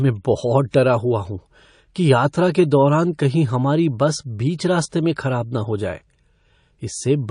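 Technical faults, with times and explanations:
Throughout: MP3 compression. The speech sounds watery and swirly, with chirpy, metallic edges on sibilants and soft, smeared onsets. The likely cause is heavy MP3 encoding at a rate that fits about 40 kbps. The encoder runs short of bits, so it cuts off the treble and lets weak frequency lines switch on and off between frames. On a spectrogram this shows as a hard ceiling on the upper band and patchy, flickering holes that come and go in the higher region.
0.71–0.73 s and 4.90–4.92 s: pre-echo. Just before two sharp onsets, a short hiss rises about 16 dB and then about 15 dB above the quiet floor, lasting 25 ms and 23 ms. The codec spreads its quantisation noise across a whole long transform block, which fits a window of about 52 ms with no switch to short blocks. The noise sized for the loud attack therefore spills into the silence before it. 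On a waveform a low fuzzy smear appears ahead of each transient, and a spectrogram shows a broadband haze leading the attack.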